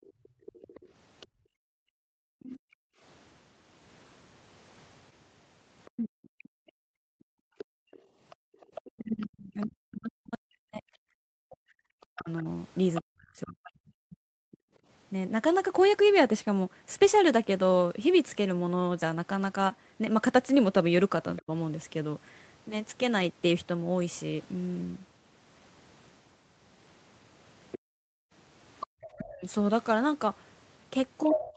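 A speech recording from a call, band-limited at 8 kHz, which fits Opus at about 32 kbps. Three kinds of fault recur.

The first is background gated by the echo canceller. The room sound drops by up to about 40 dB between 0.02 and 3.02 s, between 6.84 and 8.52 s, and between 27.79 and 28.87 s. The first window is cut for about a second in total. The second is cut for about a second and a half, and the third for about half a second. Each time the canceller clamps the microphone while the loudspeaker plays, then releases it.

The second fault is the other side's voice leaking through. A second voice comes through from 0.04 to 1.26 s at around 25 dB below the talker. It returns from 5.85 to 13.01 s at around 15 dB below. A brief scrap appears at 21.36 to 21.42 s. The loudest leak runs from 27.72 s to the end at only about 5 dB below. This is likely echo that the canceller left in the microphone signal.

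The third fault is speech suppressed in double talk. The talker's level dips by roughly 40 dB from 2.14 to 2.62 s. It dips in pieces totalling about five seconds between 5.9 and 14.6 s, and briefly at 21.42 to 21.51 s. From 29.15 s to the end the dip is around 25 dB. These dips likely come from the canceller ducking both voices while the two sides overlap.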